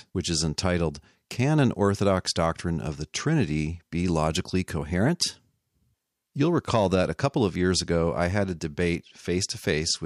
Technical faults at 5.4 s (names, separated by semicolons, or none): drift correction step